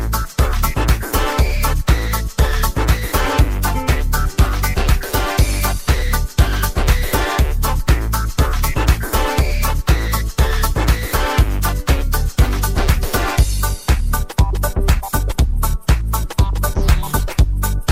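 No technical faults are audible anywhere in the recording.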